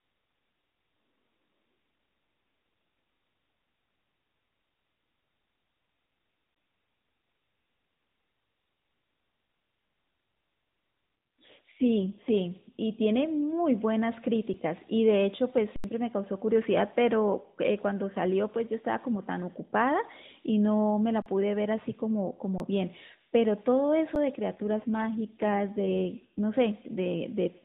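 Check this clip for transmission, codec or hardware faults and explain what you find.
Two kinds of fault occur: repeated output underruns with a held sample, and two AMR rate drops. The AMR-NB path itself runs at 12.2 kbps, so nothing appears above 4 kHz.

Underruns with held sample occur at 6.55 s, 14.54 s, 24.15 s, and from 15.76 to 15.84 s, 21.22 to 21.26 s and 22.58 to 22.60 s. The output buffer ran dry and the converter froze on its last value. The waveform shows flat plateaus, and the spectrogram shows blank vertical strips. The sound stops abruptly and audio is skipped before playback resumes.

AMR rate drops run from 11.38 to 12.34 s and from 24.48 to 26.45 s, falling from 12.2 to 5.9 kbps. The weak link forced fewer bits, so the speech turns buzzier and more synthetic without any gap. The spectrogram shows smeared, coarser harmonics below 4 kHz until the rate recovers.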